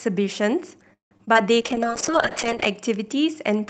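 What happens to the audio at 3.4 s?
Nothing goes wrong at 3.4 s: the speech there comes through intact, carried normally over the WebRTC call path with its Opus coding and the high-frequency limit around 8 kHz that this path imposes.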